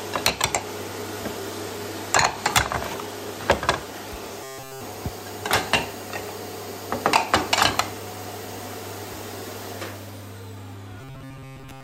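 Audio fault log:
4.43–4.81 s and 11.01–11.84 s: robotic sound from repeated short buffers. The sound turns into a rigid, metallic buzz fixed at 133 Hz. In the first stretch nearly all of it is replaced. In the second, most of it is, up to the end. The likely cause is new audio arriving too late, so the same fragment of about 7.5 ms is looped. Its repeat rate sets the constant pitch, and the real audio is skipped meanwhile.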